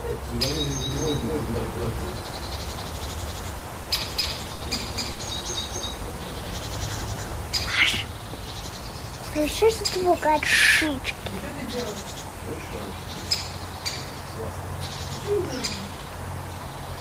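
From 0.91 to 7.71 s there's a doubled audio track: a full-band copy at about the same level trails by roughly 300 ms, likely a second capture path running slow. Between 3.59 and 4.62 s you get repeated stalls (stutter), five short holds totalling 130 ms, the longest 50 ms, as the jitter buffer kept running dry. At 5.12 to 5.21 s there's a short stall from a late packet, with the last sound stretched by 70 ms before it carries on. Then a jitter buffer slow-down from 6.12 to 7.30 s pads in 60 ms, dragging playback to 95% speed with no pitch change. Finally, the jitter buffer speed-up kicks in three times as the buffer sheds excess delay, trimming a few tens of milliseconds each time, with the last two sounding hurried: 9.30 to 10.41 s at 104%, 10.90 to 11.53 s at 106%, and 15.82 to 16.07 s at 112%.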